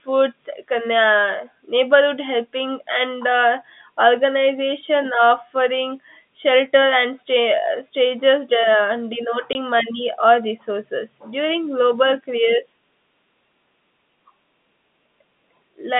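At 9.53 to 9.55 s there's a packet loss filled with silence: a 20 ms hole where the receiver had nothing and played silence, which fits two 10 ms packets going missing. It is heard over the narrow 150 Hz to 3.6 kHz G.711 telephone band.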